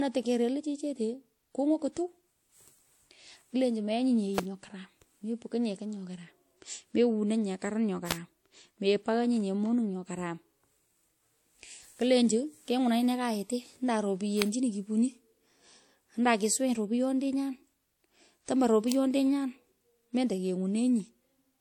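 Throughout the speech, smeared, swirly coding artefacts of two different characters overlap, with nothing above 17.3 kHz, likely from transcoding between lossy codecs, which fits an MP3 pass followed by WMA. Sharp snaps land at 4.38, 8.11, 14.42 and 18.92 s, each a brief electrical switching spike, likely a nearby switch or static discharge arcing onto the line.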